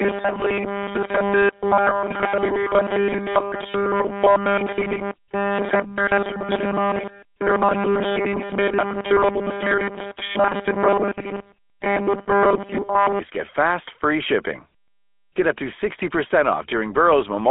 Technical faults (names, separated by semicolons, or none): GSM full-rate codec; robotic sound from repeated short buffers